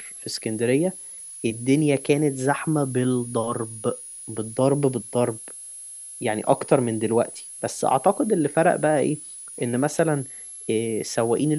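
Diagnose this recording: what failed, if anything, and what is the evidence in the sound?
A high, thin whistle sits under the speech for the whole clip, wandering between about 9.96 and 11.13 kHz, roughly 15 dB below the speech. This is switching supply whistle in the analogue power path: a switch-mode supply bursting or beating at an audible rate.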